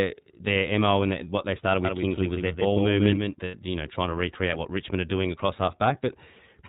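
Throughout the speech, the iLBC codec leaves nothing above 4 kHz, so a spectrogram shows a hard ceiling there. Each independently coded frame adds a slightly rough, synthetic edge that is plainly audible, which fits the 13.33 kbps mode with 30 ms frames.

From 1.85 s, right after "and what they started", until 3.35 s, a doubled audio track appears. A full-band copy trails around 150 ms behind and about 5 dB quieter, likely from a second, slower capture path. The waveform shows each syllable repeated as an offset shadow that starts and stops abruptly, with no decay.

From 3.45 to 3.55 s, just before "you know trying to", lost iLBC frames leave a 90 ms gap, which fits about three 30 ms frames. The decoder fills it with a repeated pitch cycle mixed with noise, heard as a held, buzzy vowel. The spectrogram shows a smeared, static harmonic patch, and the speech recovers almost immediately afterwards.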